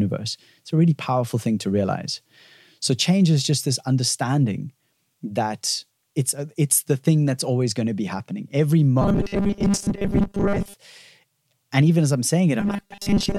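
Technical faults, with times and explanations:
9.02–10.74 s (after "to be happening every") and 12.60–13.39 s (after "and even as i'm"), robotic sound from repeated short buffers: the speech becomes a rigid, metallic 200 Hz buzz, likely from a 5 ms slice replayed in place of most of the real audio. Unlike steady hum, it still roughly tracks the words.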